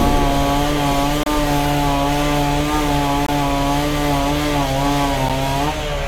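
Hard-edged dropouts to silence cut into the sound at 1.23 to 1.26 s, 3.26 to 3.29 s and 5.29 s, roughly every 2 s. This is a gap between stream segments. Consecutive segments' time stamps don't meet, so the player inserts about 30, 24 and 11 ms of silence without losing any audio.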